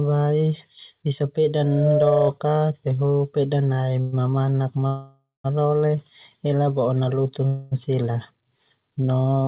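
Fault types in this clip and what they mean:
Loudspeaker feedback squeal: the microphone is picking up the loudspeaker it feeds, and at one frequency the loop gain passes unity, so that frequency reinforces itself on each pass. Here a single tone near 605 Hz rises out of the speech from 1.63 s, swells over roughly a third of a second to sit about 5 dB above the speech, and persists until 2.31 s.
Call audio freeze: the likely cause is that packets were delayed in transit and the jitter buffer ran dry, so the receiver stretched the last sound into a fading buzz rather than losing anything. This happens three times: 4.01 to 4.14 s, about 0.12 s of fill; 4.87 to 5.46 s, about 0.57 s, ending in roughly 0.17 s of silence; and 7.47 to 7.73 s, about 0.24 s, just after "ela bo'o nalutin". Speech resumes where it paused, later each time.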